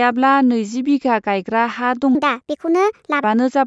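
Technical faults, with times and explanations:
2.15–3.24 s, wrong sample rate: the speech suddenly runs about 1.38 times faster and rises by roughly 5.5 semitones, sounding high and hurried. This fits 16 kHz audio played at 22 kHz with no conversion, so each sample passes sooner and every frequency scales by the same ratio. Speed and pitch move together by that single factor, unlike a pitch shift, which leaves timing intact, or a time-stretch, which keeps pitch steady.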